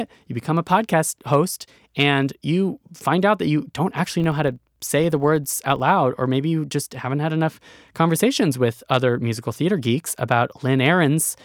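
From 4.08 to 5.95 s the speech carries a rough buzz at 25 Hz, a rapid train of ticks that swells and fades with the speech level. This is a filter restarted on every block: it drops its stored state and begins each 40 ms block from silence, leaving a small transient at every boundary.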